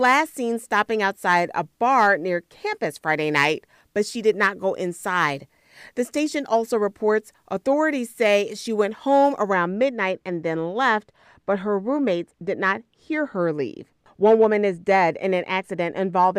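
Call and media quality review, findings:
Dull, muffled speech from 9.53 s to end at 16.38 s. De-emphasis applied wrongly: treble-cut stage run with no matching pre-emphasis, or twice. Spectrogram: smooth high-frequency fade, about 14 dB down at 10 kHz versus 1 kHz.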